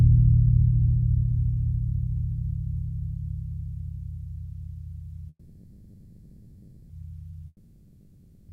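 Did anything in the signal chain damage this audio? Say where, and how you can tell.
Yes. At 5.29 s the music stalls: the last sound is drawn out as a fading buzz and hiss that fills the gap until 6.92 s, and then the music carries on exactly where it stopped. Nothing is skipped, so the rest of the clip now runs about 1.6 s late. That pattern points to a call audio freeze at the network stage, most likely packets held up in transit while the jitter buffer ran dry and the receiver papered over the wait.

A second break starts at 7.47 s and sounds similar at first: the last sound smears into a decaying buzz and hiss, lasting until 8.52 s. This time the music that returns at the very end has jumped ahead, with roughly a second of material simply gone. That is a long network dropout, again at the network stage, likely a run of packets that never arrived, so the receiver concealed the hole and then resumed past it.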